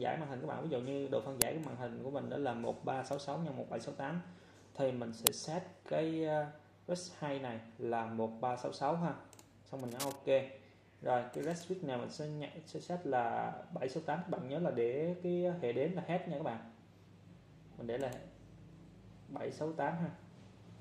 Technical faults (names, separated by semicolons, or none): uninitialised buffer; cable scratch noise